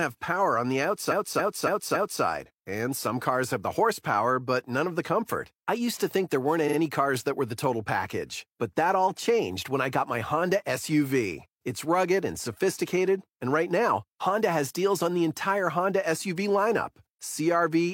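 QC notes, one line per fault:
1.07–2.19 s, repeated frames: a block of about 279 ms, consistent with a run of six compressed frames, is played four extra times, adding about 1.11 s. It is heard as a stutter because the decoder replays identical data.
6.64–6.75 s, repeated frames: a 46 ms block, fitting a single frame, plays twice more, adding about 93 ms as a brief stutter with joins.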